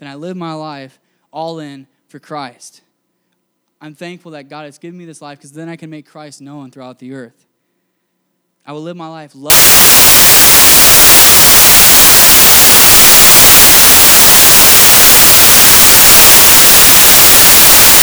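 Samples built from the wrong bytes, from 9.5 s to the end: the reader assembles each speech sample from mismatched bytes, so the rapidly changing low-order bits become the dominant part of every value. The result is loud, harsh broadband noise, close to white on the louder speech.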